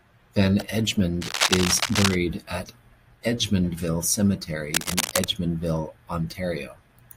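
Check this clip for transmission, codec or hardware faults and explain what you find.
Two bursts of cable scratch noise cut across the speech, from 1.21 to 2.15 s and from 4.73 to 5.24 s. The likely cause is a worn cable or connector being moved, so its contact resistance flickers and injects ragged noise at about the level of the speech, heard as scratching. On a spectrogram each burst is a dense, broadband smear; the waveform shows jagged, irregular spikes.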